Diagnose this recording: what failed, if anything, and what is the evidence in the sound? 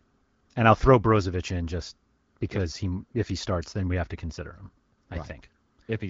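Nothing in this speech recording points to a failure at any stage, and the light coding damage is just the AMR wideband (HD Voice) codec doing its normal job at 12.65 kbit/s.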